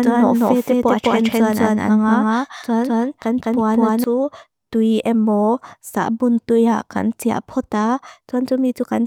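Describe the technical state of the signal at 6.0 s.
At 6.0 s the speech signal is intact, with no fault audible at that moment.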